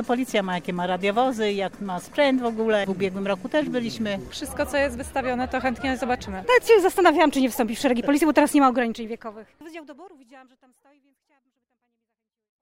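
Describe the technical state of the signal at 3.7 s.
At 3.7 s the signal is intact, with no audible fault at that moment.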